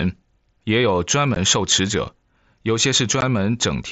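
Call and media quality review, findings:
Unconcealed Bluetooth headset packet loss at 1.35 s and 3.21 s: two 15 ms holes with hard edges. Fits two consecutive headset voice packets dropped and filled with silence. Waveform shows flat gaps; spectrogram shows thin full-height vertical blank stripes.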